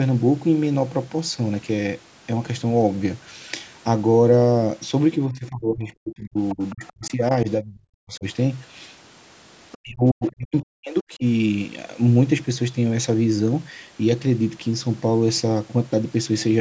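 In this speech recording, an echo canceller likely failed during double talk, pulling down the talker along with the far-end echo. The result is speech suppressed in double talk: the voice dips by roughly 30 to 40 dB or cuts out in pieces at 5.18–6.37 s, 6.54–7.22 s, 7.44–8.25 s and 9.83–11.23 s. The same canceller likely left residual echo, so the other side's voice leaks through faintly, some 20 to 30 dB below the talker, at 6.49–7.09 s and in brief scraps near 9.72 s and 10.27 s.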